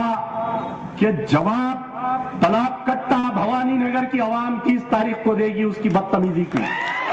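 At 3.19 s, lasting to about 3.26 s, there is a short stall from a late packet. A packet arrived after its playout time, so the jitter buffer ran dry and the receiver held the last sound for about 40 ms, then resumed from exactly where it stopped, adding 40 ms of delay. It is heard as a brief smear or faint buzz. Unlike packet loss, nothing is skipped: the sound continues intact, just late.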